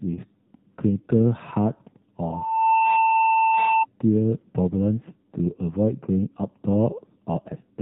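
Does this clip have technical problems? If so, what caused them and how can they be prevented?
Yes. The whole recording passes through the AMR narrowband mobile codec. Nothing above 4 kHz survives, and the speech sounds buzzy and synthetic. That degree of damage fits AMR-NB's 7.4 kbps mode. Preventing it means using a wideband codec or a higher bitrate.

From 2.24 to 3.85 s there is a loudspeaker feedback squeal. The microphone picks up its own loudspeaker, and the loop gain tops one at 892 Hz. That tone swells over about half a second to a few dB above the speech. Lower the gain or move the microphone away from the speaker.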